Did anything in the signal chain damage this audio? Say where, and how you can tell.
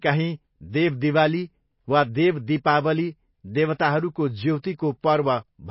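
Yes. Throughout the speech the top end stops dead at about 5.5 kHz, and the remaining sound has a watery, swirling quality with smeared consonant edges. That points to the codec stage, most likely MP3 compression at a very low bitrate, around 24 kbps. Starved of bits, the encoder discards everything above a fixed cut-off and drops weak frequency lines that flicker in and out between frames, which produces the swirl.

Pre-echo appears twice: a short hiss runs from 3.74 to 3.79 s, about 57 ms ahead of an attack, and a much briefer one sits at 5.02 s. These also come from the codec. It spreads its quantisation noise across a whole transform block, so when a sharp onset lands late in a block, noise sized for the loud part leaks into the quiet lead-in and softens the attack.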